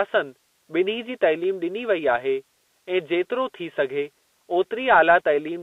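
Throughout, the speech carries Bluetooth CVSD headset codec damage: one-bit slope tracking, consistent with 64 kbps, leaves scratchy sibilants and granular hiss, unlike a clean 250 Hz–3.7 kHz band-limit.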